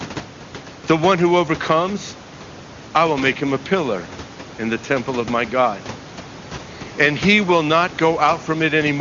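No technical faults can be heard anywhere in this speech recording. Room noise sits about 19 dB below the speech, and the audio stops at roughly 7.3 kHz, as expected for the AMR wideband (HD Voice) codec, which here sounds like its higher-rate mode with little or no audible coding damage.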